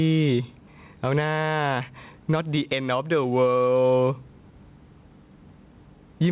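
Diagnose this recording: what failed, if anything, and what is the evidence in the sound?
Gain pumping runs through the whole speech recording, most likely because the input gain is set far too high and a fast limiter or compressor in the capture or call-processing stage clamps it on every loud syllable. The gain swings by something like 10 dB as soon as the talker gets loud, so the level breathes. Loud and quiet passages sit close together, squashed, all within a band that stops near 4 kHz.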